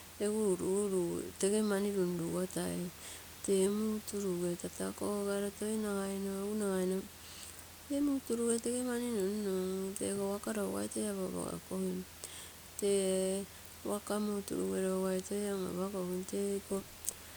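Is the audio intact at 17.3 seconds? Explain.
Yes, the audio is intact at 17.3 seconds, with only the ordinary room noise sitting about 17 dB below the speech.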